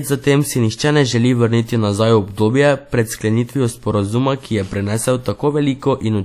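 Throughout the speech there is plainly audible WMA compression damage, likely from a low-bitrate encode around 48 kbps. The transform codec spreads its quantisation noise over tens of milliseconds. So the audio sounds ringing and washy. A hiss rises and falls with the signal. Weak detail is stripped out. Nothing remains above about 18.2 kHz. The fault runs for the whole clip.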